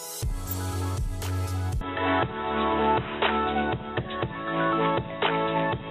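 DAB burbling appears from 0.45 to 0.53 s. Weak reception let a small number of bit errors, on the order of a tenth of a percent, slip past the error correction into the MP2 audio data, corrupting samples and scale factors so that individual sub-bands leap in level for up to a frame. About six frames are hit, and it comes across as a brief burbling laid over the sound.

From 1.81 s to the end, the sound abruptly turns narrower and boxier, with nothing above about 3.8 kHz, a level shift of around 5 dB, and a new background noise floor sitting about 30 dB below the signal. There is no gap at the change. This is likely an input switched to a poorer device mid-recording, a different microphone or a headset's call profile bringing its own restricted bandwidth, tone and noise.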